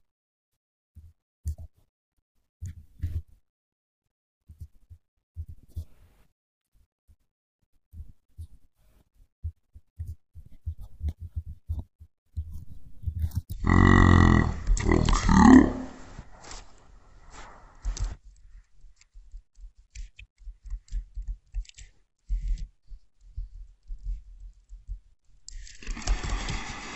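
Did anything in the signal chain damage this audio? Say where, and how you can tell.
Yes. From 13.53 s to the end, a section at the wrong speed plays at 0.5x, likely from a playback or editing stage running against the wrong clock. Speed and pitch drop together: the speech turns slow and deep, roughly ten semitones lower.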